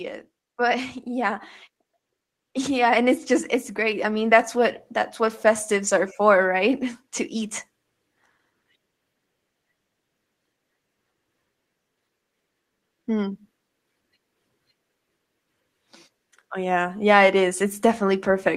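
From 2.65 to 7.63 s the automatic gain control judged the input too quiet and raised its gain gradually, by about 9 dB in all. The result is automatic gain rising: voice and background swell together over those five seconds, the room growing louder along with the speaker.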